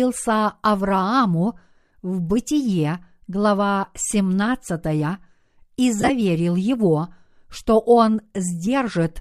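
Lost LE Audio frames between 5.99 and 6.10 s break up this speech clip: about 67.5 ms of sound drops out in short bursts scattered across roughly 105 ms, the longest gap being around 20 ms. Each time a frame goes missing, the LC3 decoder refills it from the previous spectrum with randomised signs, so the speech briefly turns into a rough, noisy smear. The brief dropouts suggest a 7.5 ms frame size, and the faint grain elsewhere is likely light LC3 coding.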